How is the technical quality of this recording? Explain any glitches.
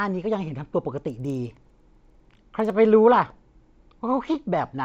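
The recording has one clear fault. From 1.05 to 2.7 s a rapid, regular ticking rides on the speech, about 20 clicks per second, so close together that it edges toward a low buzz. It sounds only while speech is present. The cause is a resampler restarted on every block, in a conversion that fits 16 kHz up to 48 kHz. Each 50 ms block was converted in isolation, so the filter lacked real neighbouring samples at every boundary, leaving a small error there.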